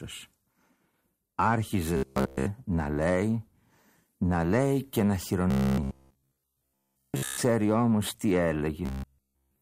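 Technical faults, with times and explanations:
1.97–2.46 s, 5.51–7.38 s, 8.86–9.61 s: robotic sound from repeated short buffers. Audio likely arrived too seldom, so a slice of about 15 ms was looped over most of the first stretch and all of the later two. This forces a fixed 66.8 Hz metallic buzz over the speech.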